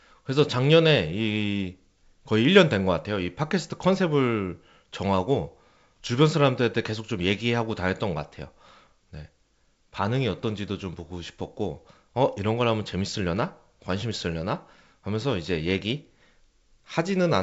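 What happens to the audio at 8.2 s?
Nothing goes wrong at 8.2 s: the speech passes through intact, carried by G.722 wideband coding at 64 kbit/s with its usual upper limit near 7.7 kHz.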